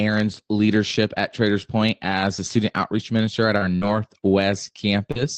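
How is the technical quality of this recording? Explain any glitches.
The recording has one fault, scattered short gaps, running from about 2.99 to 5.18 s, right after "as a student". The audio passes through a call codec that sounds like Opus at a modest rate, and the top end stops around 8 kHz. In this stretch about three small pieces of the signal, roughly 140 ms in total and none longer than about 70 ms, never arrived in time. The receiver filled each hole by extending the sound just before it, so these spots come across as brief ticks, smeared syllables or tiny hiccups rather than silence. About 7% of that stretch is patched this way. A single long dropout would be different. It would leave one obvious hole or a stretched, buzzy drone. Here the damage is spread thin, and the speech stays mostly clear between the glitches.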